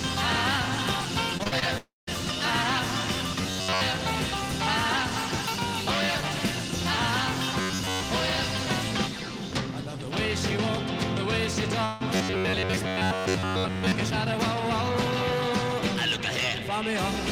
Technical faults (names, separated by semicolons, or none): repeated packet loss (robotic sound); long network dropout; robotic sound from repeated short buffers